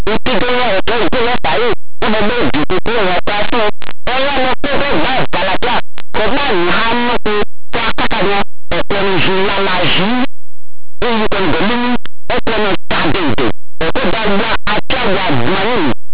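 Speech, distorted from start to finish by linear audio read as companded: plain 8-bit linear samples decoded as mu-law, so values just on one side of zero become the largest outputs while those on the other side stay small. The spectrogram shows dense broadband smearing over the 8-bit signal.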